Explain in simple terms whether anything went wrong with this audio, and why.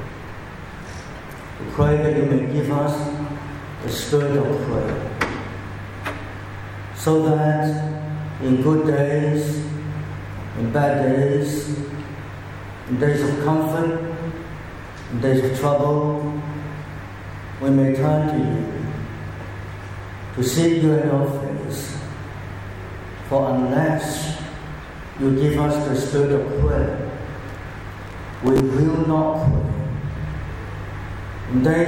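Two bursts of gritty crackle tear through the sound, from 3.70 to 4.05 s and from 27.49 to 28.6 s. This is processor overload crackle: the computer fell behind and missed about 20 and then about 30 tiny audio chunks, replaying stale scraps each time.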